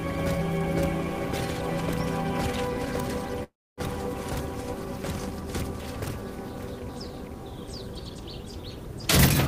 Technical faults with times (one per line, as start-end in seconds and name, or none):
3.43-3.81 call audio freeze